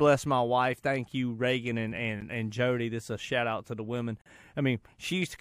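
A gap between stream segments sounds at 2.21 s and again from 4.22 to 4.26 s, right after "out to the women". At each 2-second segment boundary the timestamps leave a small hole, and playback fills it with silence: about 10 ms the first time, about 43 ms the second. Each is a hard-edged dropout, the first brief, the second longer. Time is inserted rather than sound removed.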